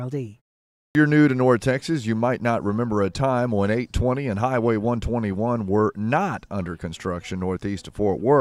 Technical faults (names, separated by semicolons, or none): clipped start after a pause